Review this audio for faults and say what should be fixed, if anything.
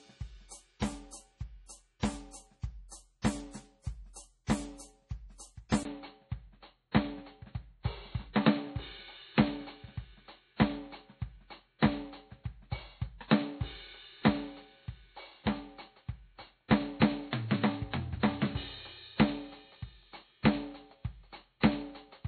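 The whole track has a watery, swirly quality, with nothing above 11.4 kHz. That's the heavy damage you'd expect from likely MP3 compression at a very low bitrate, something around 32 kbps, where weak frequency lines drop in and out frame to frame and the treble gets cut. To prevent it, encode at a much higher bitrate or keep a lossless master.

At 5.83 s there's a short dropout of about 20 ms. From there to the end the music goes dull and boxy, with nothing above 4.3 kHz, a level change of about 5 dB and a new noise floor sitting well below the music. That points to the input likely being switched to a poorer device mid-recording. To prevent it, lock the recording input so the system can't change devices partway through.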